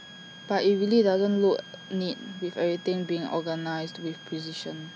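It's a speech clip with a switching supply whistle running under the whole thing: a thin high tone sitting about 20 dB below the speech and wandering between roughly 1.6 and 1.67 kHz. That drifting pitch is the giveaway. A switching power supply near the recording chain is dropping into an audible burst mode or beating against another supply, and the tone slides around as the load on it shifts.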